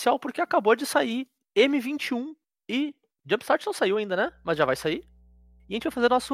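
From 4.27 s, right after "não saiu ainda", mains hum sets in and runs to the end: a steady 60 Hz tone, likely from a ground loop, sitting roughly 30 dB under the speech. On a spectrogram it forms a flat horizontal line at 60 Hz, with some low harmonics above.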